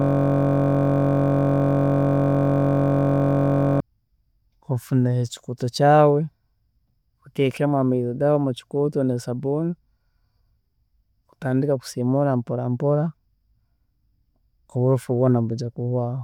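A system hang loop runs from the very start of this speech clip to 3.80 s. One 21.33 ms buffer, which fits a 1024-sample ring, repeats 177 times as a steady 46.9 Hz buzz.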